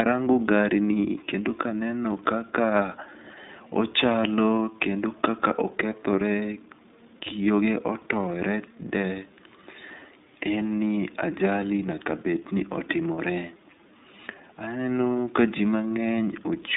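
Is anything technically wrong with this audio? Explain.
Yes. Throughout the clip, the speech carries the iLBC codec's damage. Each frame is coded independently, which fits 30 ms frames at the 13.33 kbps mode, leaving plainly audible rough, synthetic texture. A spectrogram shows energy confined to roughly 150 Hz to 3.7 kHz, with nothing above 3.8 kHz.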